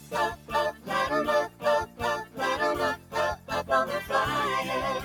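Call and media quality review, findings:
Noise suppressor applied to music or sounds: speech-tuned suppression left active on a non-speech path. Steady tones, ambience and tails classed as noise and attenuated, level swinging by around 10 dB as the gain tracks the signal. Transients pass while sustained material sinks, giving audible pumping and a thinned, fluttering texture across the whole 5 s clip. Probable component: suppressor stage in the capture or send chain. Fix: bypass for music/sound content.

Sound cut by the noise suppressor: seven dips, each to about 10 dB below the surrounding level, at 0.33–0.53 s, 0.72–0.90 s, 1.48–1.64 s, 1.86–2.01 s, 2.24–2.39 s, 2.96–3.15 s and 3.35–3.51 s. Each lasts roughly 150–200 ms. Same suppressor misreading sustained or decaying content as noise and clamping it, so held sound sinks and decays are cut short.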